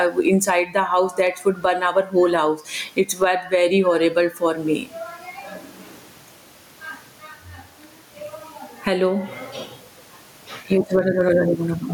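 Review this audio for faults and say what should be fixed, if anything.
Gain pumping runs through the whole recording. The input gain was likely set far too high for the microphone, so a fast limiter or compressor clamps down on every loud syllable and lets go in the pauses. The level swings by roughly 15 dB. The faint room noise sits about 45 dB below the speech, and the speech itself sounds squashed, with loud and soft parts pressed together. Lowering the microphone gain so peaks stay well under the limiter threshold would prevent it.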